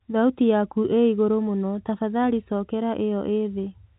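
No technical faults are audible in this speech clip.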